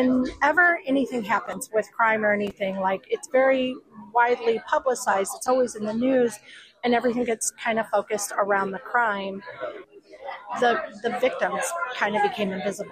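No technical faults are audible.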